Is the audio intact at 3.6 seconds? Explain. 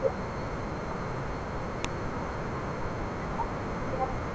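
Yes, at 3.6 seconds the speech plays through intact, with no dropout, glitch or other fault at that moment.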